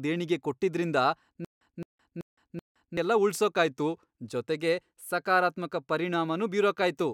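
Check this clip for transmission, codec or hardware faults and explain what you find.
One fault is present, a stutter with silent gaps, from 1.45 to 2.97 s. It comes right after "ದೇಣಿಗೆ ಕೊಟ್ಟಿದ್ರಿಂದ" and ends before "ಎಲ್ಲ ಉಳ್ಸೋಕಾಯ್ತು ಜೊತೆಗೆ". A speech fragment of about 217 ms repeats four times. Each repeat is followed by about 164 ms of dead silence, giving an even 382 ms rhythm. The likely cause is a stalled stream or player that replayed its last fragment at each retry, then ran dry. The speech due in that span is lost.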